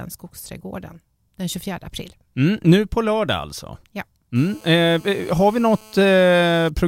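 At 4.36 s a GSM phone buzz starts under the speech and runs to 6.70 s. A 2G phone close to the recording chain is on a call and transmitting in bursts 217 times a second. The audio circuitry rectifies those radio pulses into sound. The result is a hard, raspy buzz at 217 Hz, rich in harmonics, sitting about 27 dB below the speech. It holds nearly steady and has no relation to what is being said.

At 6.78 s a brief GSM signalling burst appears. The same phone is still on the call, but its user has gone silent, so it sends only a short group of radio bursts. Rectified by the circuitry, this comes through as a tick. It lasts only a few milliseconds and sits roughly 25 dB below the speech level.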